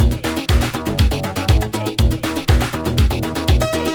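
Throughout the audio there is a crude rate conversion: samples were repeated to the nearest position rather than interpolated through a proper filter, which fits a change from 44.1 kHz to 48 kHz. The periodic repeat pattern adds inharmonic tones about 25 dB below the signal. They come across as a gritty, fizzy buzz that rides on louder and brighter passages and has no musical relation to the sound itself.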